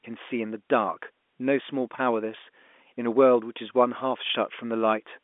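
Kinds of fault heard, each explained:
Nothing in this speech clip stands out as a fault, so there's nothing to list here.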